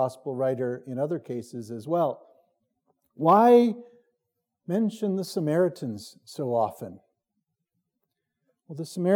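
No technical faults can be heard anywhere in the audio, and the signal holds steady and intact throughout.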